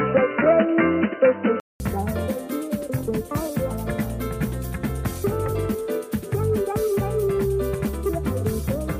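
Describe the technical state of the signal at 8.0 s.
At 8.0 s the signal is intact, with no audible fault at that point.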